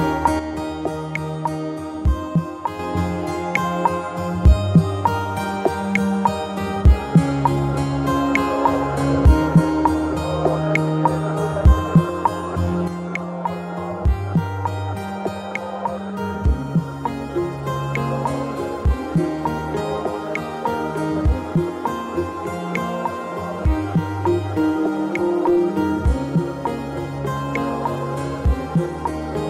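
The audio drops abruptly by about 6 dB from 0.39 to 2.79 s, and again from 12.88 s to the end. The likely cause is one channel dropping out before the mono sum.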